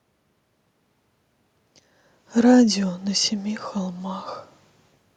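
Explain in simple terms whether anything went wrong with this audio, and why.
Nothing went wrong here: the background noise is just the room the microphone was in, and the change in level around two seconds in is only the talker shifting position, not a problem with the recording system.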